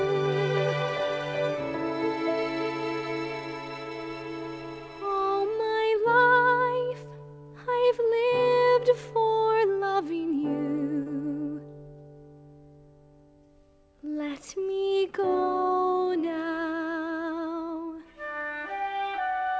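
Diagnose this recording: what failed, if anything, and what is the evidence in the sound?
Between 11.03 and 11.09 s the audio briefly smears, a wobble of a few hundredths of a second where the sound seems stretched rather than continuing naturally. This is short concealed packet loss at the network stage: about 30 ms of audio never reached the decoder in time, so the receiver synthesised roughly 32 ms by extending what came before and then crossfaded into the real signal. The band stops at 8 kHz, which fits a G.722 wideband call path.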